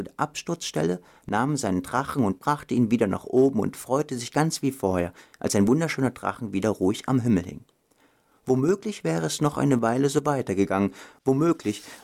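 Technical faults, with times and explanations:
4.1 to 9.7 s, resampler restarted on every block: a steady 50 Hz buzz rides under the sound only while signal is present. The converter handled each 20 ms block alone, leaving a small error at every edge, consistent with a 44.1 kHz to 48 kHz conversion.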